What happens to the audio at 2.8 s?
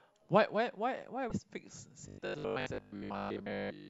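Robotic sound from repeated short buffers runs 2.08–3.88 s: a fixed 50 Hz buzz, likely from 20 ms chunks looped over skipped audio, with no gaps like dropouts.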